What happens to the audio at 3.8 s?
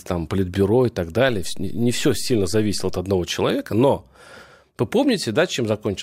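Nothing goes wrong at 3.8 s; the speech runs on intact through that moment with no dropout, click or distortion.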